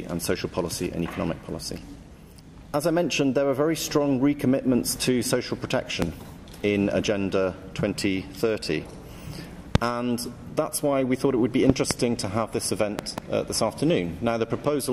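A voltage step, likely from a plug, switch or static discharge, entered the signal path, leaving loud pops about 20 to 25 dB above the audio at 6.02–6.05 s and 9.75–9.78 s, and doubled pops at 11.70–11.93 s and 12.99–13.20 s, with the sound continuing underneath.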